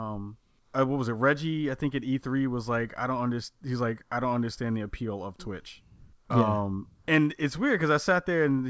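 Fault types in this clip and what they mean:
No faults are heard in this speech clip.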